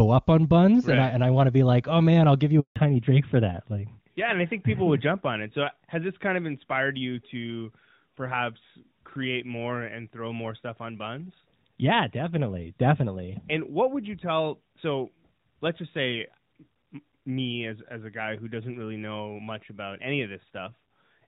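Right after "man I'll give you", at about 2.60 s, there's a handover gap: the call jumped networks and no speech frames came through for 160 ms, until 2.76 s. The speech drops out almost instantly, there's dead silence, and whatever was said in there is just gone.

From 2.76 s to the end, the call falls back to narrowband. Before the gap it's clean HD Voice, consistent with AMR-WB at a high rate. Afterwards nothing above 4 kHz survives, which points to AMR-NB, so the speech sounds duller and rougher.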